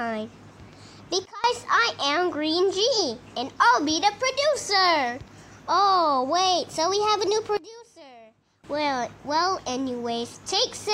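At 1.25 s to 1.44 s and again at 7.57 s to 8.64 s, the sound and its background noise drop abruptly by about 20 dB, then return, a sudden gain jump, likely a gain change applied without a ramp. The waveform shows sharp vertical steps; the spectrogram dims uniformly across all frequencies.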